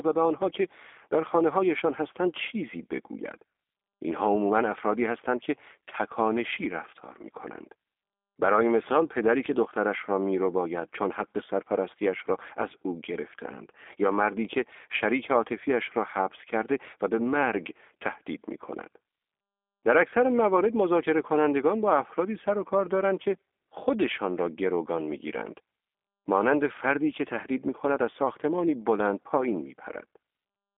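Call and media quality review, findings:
G.729 codec, entire clip: speech band-limited to roughly 250 Hz to 3.5 kHz, plainly rough, synthetic texture. Filter-and-pulse rebuild of each 10 ms frame, fits an 8 kbit/s G.729A path.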